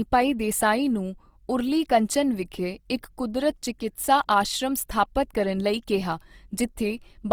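Throughout the clip, the speech has a grainy, rough texture. The sound is noisy, not clean. High frequencies still extend across the full band. This is likely Opus compression in its music mode, at a low bitrate near 24 kbps.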